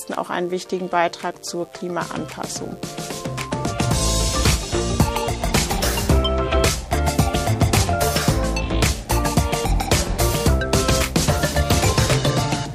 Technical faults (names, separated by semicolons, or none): mains buzz